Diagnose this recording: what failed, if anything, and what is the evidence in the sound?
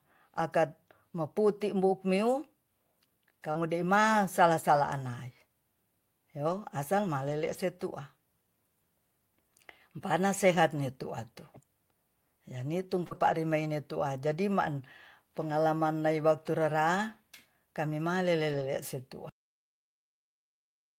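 Network stage: short concealed packet loss at 3.51 s and 13.07 s. About 40 ms of speech never arrived in time each time. The decoder extended the preceding sound, then crossfaded back. Each one is a brief smear or wobble.

Network and codec stage: lost packet rebuilt from error correction at 3.55 s, 7.29 to 7.55 s, 11.57 s, and 13.11 to 13.33 s. There are no gaps. The decoder played low-bitrate copies carried in later packets. Those stretches sound rougher and noisier. The longer runs fit several 20 ms frames.

Playback or storage stage: cut-off end at 19.29 s. The speech stops mid-sound and drops straight to digital silence with no decay. The final buffers were never written or played out.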